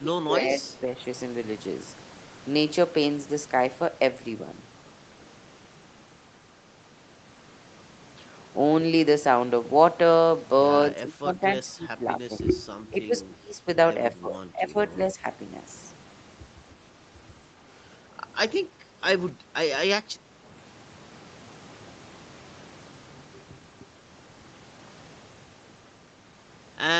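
The speech dips and cuts out in pieces at 0.0–0.85, 10.93–12.41, 12.82–13.14, 13.3–13.67, 14.15–14.97 and 15.14–15.25 s, losing up to roughly 20 dB. This is likely speech suppressed in double talk, with the echo canceller muting the talker along with the far-end echo. At 18.68–19.01 and 19.32–19.54 s the room background briefly sinks, by about 7 and 9 dB. This is background gated by the echo canceller, which clamped the microphone while the loudspeaker played.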